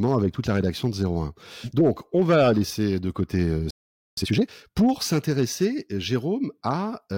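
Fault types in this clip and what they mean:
Playback stall: speech halts mid-flow into about 0.47 s of silence at 3.71 s, likely the player running dry; a sustained gap, not a click.
Time-compressed catch-up: from 4.17 to 4.63 s, on "pour s'intéresser", speech runs at double speed with normal pitch, unlike tape speed-up.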